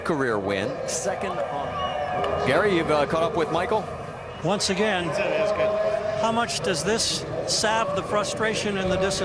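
Nothing stood out as a technical fault on listening to the clip.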